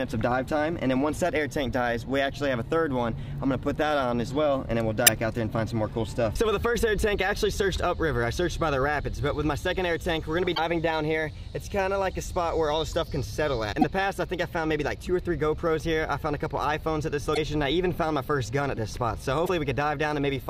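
Damaged data in a compressed stream breaks the audio at 5.03–5.08, 10.52–10.59, 13.81–13.84, 17.31–17.38 and 19.42–19.49 s, where corrupted frames leave the decoder misreading data and resyncing to the next frame header.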